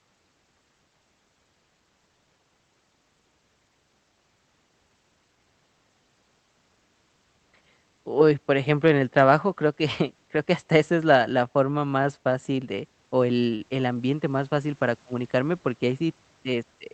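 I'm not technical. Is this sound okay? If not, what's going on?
No. Near the end of this speech clip, at about 13.55 to 13.63 seconds, there is a short stall from a late packet. One piece of the audio arrived late over the call connection. The receiving side had nothing left to play, so it stretched the last sound for about 47 milliseconds. When the piece arrived, playback resumed where it had stopped. No speech is lost, but one sound lingers slightly, with a faint buzz or dip.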